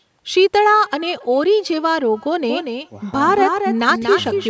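From the first word to the last, the speech is trailed by an echo with no canceller: the far end's loudspeaker feeds its microphone, nothing strips that out, and the talker's own voice returns after the network round trip, roughly a third of a second late and about 28 dB down. At that level it is a faint, thin ghost rather than a distinct repeat. The thinness and the faintness are what set it apart from a plain copy.

At 2.48 s a doubled audio track cuts in abruptly and runs to the end of the clip. A second full-band copy sits about a fifth of a second behind the original and only around 5 dB quieter. It likely comes from the same signal being picked up again through a slower path. Unlike the echo, this copy has no decay or room tone, and it is nearly as loud as the original, so it sounds like two identical feeds out of step. Both copies, like the rest of the clip, stop at 8 kHz, as expected from call microphone processing.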